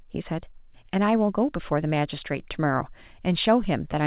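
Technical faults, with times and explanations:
No technical faults can be heard in the clip. The speech comes through standard mu-law telephone coding, so its band stops at 4 kHz and a faint quantisation noise rides along with its level.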